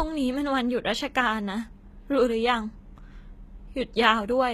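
A speech recording in which the s sounds turn gritty and lispy and the treble sounds bright but metallic for the whole clip, likely from HE-AAC compression at a low bitrate, around 20 kbps. Above the crossover, a spectrogram shows copied blocks of lower bands whose harmonics fail to line up.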